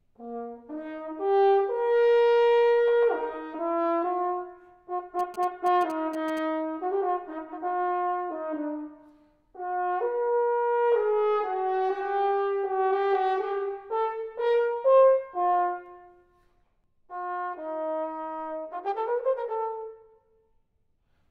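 From 5.19 to 6.39 s there's a burst of GSM signalling interference: a galloping dit-dit-dit of short buzzes at about 217 Hz, sitting roughly 20 dB under the sound. A nearby 2G phone's radio bursts are getting rectified by the audio circuitry.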